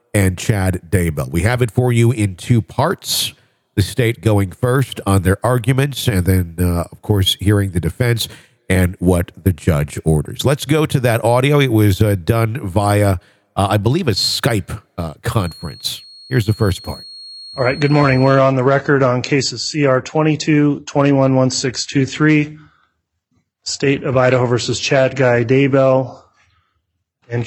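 A loudspeaker-to-microphone loop likely sits just at the edge of feedback from 15.32 to 18.46 s, so one narrow frequency keeps recirculating without building into a full howl. The result is a feedback whistle: a thin, steady tone near 4.3 kHz sitting roughly 20 dB beneath the main sound, swelling and fading slowly in level as the loop gain hovers around its tipping point, then disappearing at 18.46 s.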